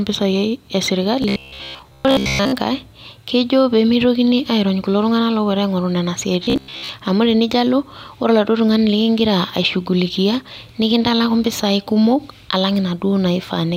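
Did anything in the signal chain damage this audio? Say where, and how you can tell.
Yes. Robotic sound from repeated short buffers hits 1.22–2.54 s and 6.44–6.89 s as a rigid metallic buzz locked at 66.8 Hz. Likely a starved driver buffer looping a 15 ms block, skipping most real audio. Unlike codec warble, that pitch never follows the speech.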